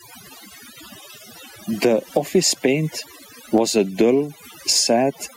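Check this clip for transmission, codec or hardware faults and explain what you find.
Two faults run through the whole speech clip: overdone noise removal and gain pumping.

Overdone noise removal is present from start to finish. A noise reducer set far too aggressively has pushed individual frequency bands down or out whenever they sat close to its noise estimate, taking the softer parts of the voice with them. The gaps fall to near silence scattered with twinkling specks. The specks distinguish it from a plain gate, which cuts the whole signal at once and leaves no such residue.

Gain pumping is also audible throughout. The gain is pulled down on each loud sound, a swing of around 10 dB, so loud and quiet passages sit unnaturally close together and the sound feels squashed. The likely cause is input gain set well above what the microphone needed, with a fast limiter or compressor clamping down on every peak. 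The swinging gain distinguishes it from a steady level drop, which would leave the level constant.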